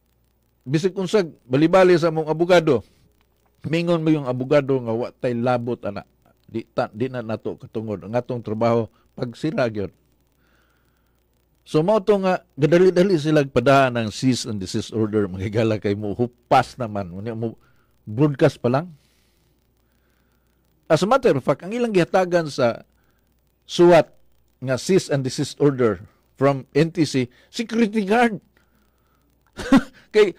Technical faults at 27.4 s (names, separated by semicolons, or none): none